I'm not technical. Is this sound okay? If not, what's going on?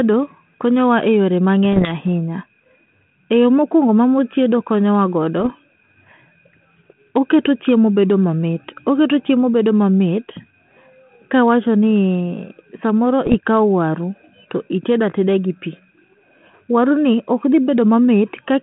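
No. This is speech, and it has bit errors on an ADPCM link: bits in the digital phone connection got flipped, throwing the decoder off for a moment. You hear pops and rough, uneven bursts at 1.73–1.89, 5.40–5.49 and 13.26–13.35 seconds.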